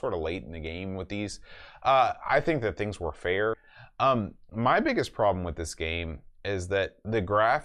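At 3.53 s, right after "think that things were", the speech is broken by a brief burst of damaged data in a compressed stream. Corrupted bytes made the decoder misread that frame and lose its place in the stream before resyncing on the next valid header. The result is a tiny glitch lasting about 6 ms.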